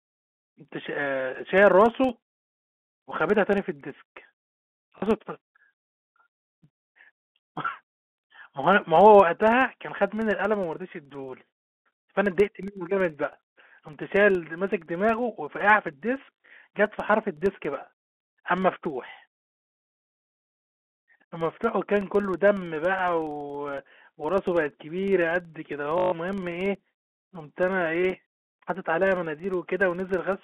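Throughout this telephone-band speech, a filter restarted on every block drops its state at each block boundary and starts again from silence, so each block opens with a small transient. This produces a steady buzz near 21.5 Hz, which fits a 2048-sample block, rising and falling with the speech level.

Packet loss with last packet repeated then strikes three times: 4.98 to 5.02 s (40 ms), 16.26 to 16.5 s (120 ms scattered over 240 ms, runs up to 40 ms), and 25.98 to 26.12 s (140 ms). The receiver replays the last packet, and the longer runs stutter robotically, which fits 20 ms packets.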